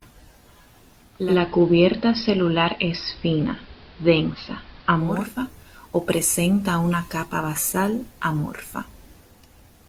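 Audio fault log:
1.02–5.35 s, digital radio blending to analogue. Cross-fades over 430 ms to the AM broadcast. Faint hiss about 30 dB below the signal, level shifts about 2 dB.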